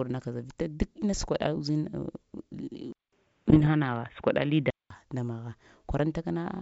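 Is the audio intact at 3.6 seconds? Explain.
No, 3.6 seconds lands inside two overlapping problems.

The bigger one runs from 2.92 to 4.90 s and sounds like the input switched to a poorer device, most likely a swap to another mic or a headset's call profile. There's about a 200 ms silence at the switch, then everything above 3.8 kHz is gone, so it turns dull and boxy. The level shifts by roughly 5 dB, and a faint new noise floor sits around 45 dB down. The switch comes just before "nda magha".

On top of that, from 3.46 to 3.69 s there are bit errors on an ADPCM link, at a rate of around one percent. Each flipped bit knocks the decoder's step size and predictor off, so the damage rings on for a few milliseconds instead of staying a single click. You hear pops and rough, gritty bursts with brief level jumps. The length of the disturbance fits a run of about a dozen corrupted frames.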